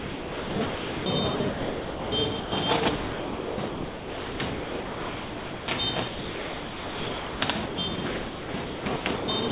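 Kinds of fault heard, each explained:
Sound chopped by the voice detector: The sound keeps breaking up from 0.0 to 1.06 s, 1.36 to 2.12 s, 2.96 to 5.68 s and 6.08 to 9.5 s. Pieces are swapped for flat synthetic hiss, likely the sender's detector toggling transmission. Roughly 2.5 s vanishes in the third stretch.
Sound dropped by the voice detector: At 2.4 s the sound cuts out for 120 ms and is filled with steady comfort noise before it returns at 2.52 s. The detector likely mistook this quiet passage for background and briefly stopped sending it.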